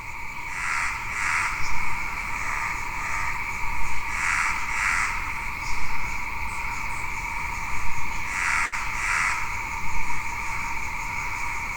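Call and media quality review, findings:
Short stall from a late packet at 8.65–8.75 s. Sound held too long, slight buzz or dip. Jitter buffer ran empty; receiver stretched the last sound about 71 ms, then resumed without loss.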